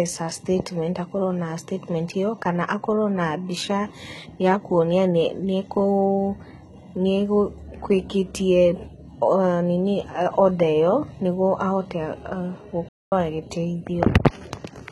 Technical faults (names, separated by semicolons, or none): HE-AAC compression; playback stall